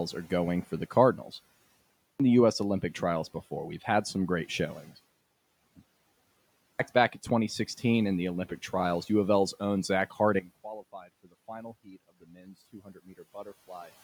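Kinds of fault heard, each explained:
Clipped start after a pause: the output device wakes slowly after short silences, swallowing roughly 0.34 to 0.38 s of each onset, as before "back in"; the waveform jumps straight to full level.
Sudden gain jump: at 10.39 s the sound and background drop together by about 16 dB, likely an unramped gain change; the waveform envelope steps down abruptly.
Speech cut by the noise suppressor: between 10.93 and 13.2 s, brief bits of speech are pulled down by about 9 to 14 dB, showing as sudden faint gaps on the spectrogram.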